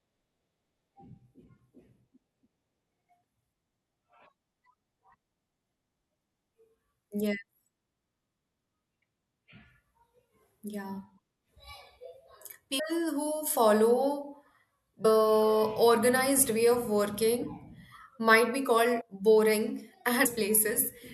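Speech that lurches forward with brief jumps at 9.01, 12.78, 15.04, 17.41, 19.00 and 20.25 s, each dropping roughly a fifth of a second, briefer at 17.41 s and closer to half a second at 20.25 s. These are compressed frames skipped, which fits whole 24 ms frames missing or rejected by the decoder.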